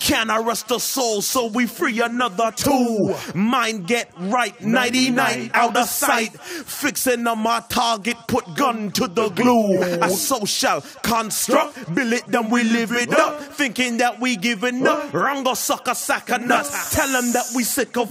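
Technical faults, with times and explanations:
Nothing here trips any alarms; there are no technical faults to point to anywhere in the recording.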